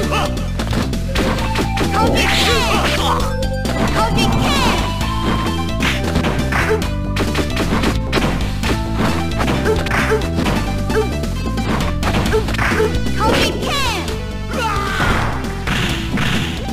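From 13.95 to 15.02 s, GSM phone buzz: rectified 217 Hz handset bursts make steady, raspy drone about 18 dB down, harsher than mains hum.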